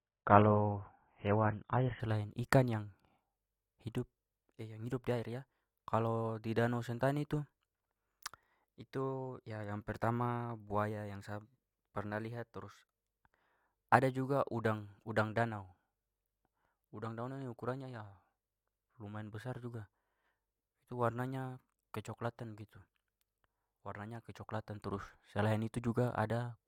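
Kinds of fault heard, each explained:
Adaptive stream starting at a low bitrate: from 0 to 2.0 s the speech has nothing above 3.8 kHz and stronger codec artefacts, which fits a very low-bitrate AAC version picked for a quick start. The player then switches up, and the treble returns suddenly, without a gap.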